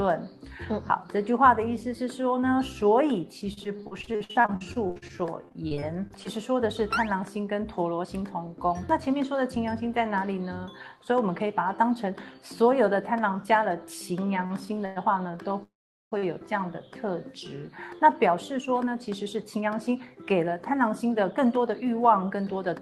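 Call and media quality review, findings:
Repeated packet loss (robotic sound), 3.53–6.27 s. Choppy stretch with dozens of short holes, longest 51 ms, about a quarter of the span concealed, roughly 0.56 s of content gone. Receiver concealment keeps extending the last frame. Spectrogram: frozen, smeared harmonic bands broken by vertical seams.

Jitter buffer speed-up, 8.04–9.56 s. Audio runs 6% fast at unchanged pitch, roughly 0.1 s trimmed. Buffer over target, so time-stretching drops pitch-period slices. Waveform: tighter periodic envelope. Spectrogram: harmonics stay level while events compress in time.

Jitter buffer speed-up, 17.77–22.76 s. Hurried feel, 10% fast, around half a second cut. Same mechanism: buffer draining excess delay through repeated short period removals. Visible as compressed timing with no pitch shift.

Repeated stalls (stutter), 14.46–16.24 s. Three hitches, longest 105 ms, nothing lost. 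Late packets starve the jitter buffer, and the last sound is held until data resumes. Waveform: brief flat-envelope repeats. Spectrogram: horizontally stretched frames.

Jitter buffer slow-down, 14.60–16.59 s. Drawn-out sound at 97% speed, same pitch, 74 ms added. Buffer refilling its reserve by duplicating pitch periods and pause fragments. Spectrogram: elongated harmonic segments.

Call audio freeze, 15.63–16.14 s. Held sound fading into about 0.42 s of silence, then resumes where it stopped, nothing missing. Likely a jitter buffer underrun from packets held up in transit. Waveform: decaying tail, then a flat gap.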